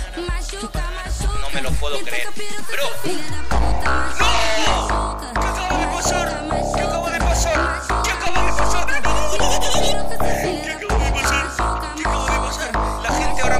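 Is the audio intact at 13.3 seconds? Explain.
No. A DC step occurs at 13.26 s and holds until the clip ends at 13.59 s. The waveform's zero line jumps by about -15 dBFS, producing a low thump at onset while the sound itself carries on unchanged above the shifted baseline.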